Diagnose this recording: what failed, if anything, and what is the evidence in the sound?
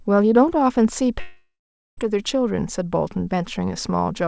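A likely long network dropout, 1.20 to 1.99 s: a fading buzz, then silence, and speech resumes about 0.78 s later, unlike a brief concealed packet loss.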